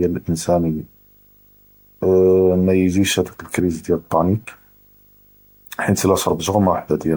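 A speech recording carries a video or display buzz for its whole length. A steady 50 Hz buzz, matching a 50 Hz picture field rate, sits under the voice with a layer of hash above it and a thin high tone at 15.6 kHz, the horizontal line rate of the display. The interference runs at around 35 dB below the speech, low enough to sit beneath it, and points to a monitor or video cable coupling into the audio wiring. Throughout the clip the speech also has a swirly, smeared and hollow character, with consonant attacks blurred, more degraded than a single MP3 encode at this quality would leave. Content still reaches up to about 20.1 kHz, so the damage is not a band limit. The likely cause is generation loss: repeated decoding and re-encoding through MP3, which fits roughly seven passes at around 96 kbit/s. Each pass quantises against a shifted frame grid, so noise and spectral holes accumulate.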